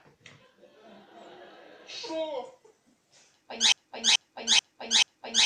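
At 3.72 s a broken-record loop starts: a 0.43 s fragment repeats exactly, back to back, four times until the clip ends. A stalled player, encoder or stream likely kept resending it, losing the intended audio. Unlike echo, each pass is identical and never fades.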